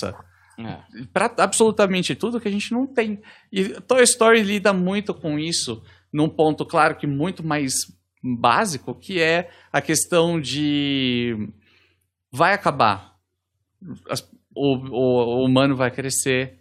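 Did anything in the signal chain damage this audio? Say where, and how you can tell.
No, nothing along the signal chain left a mark I can hear on this speech recording, so there's no damaged stage to point to.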